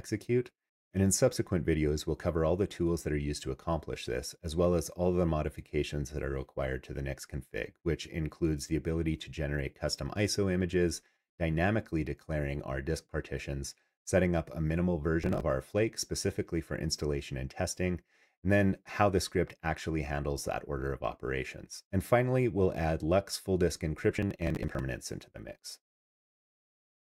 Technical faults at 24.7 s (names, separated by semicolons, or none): processor overload crackle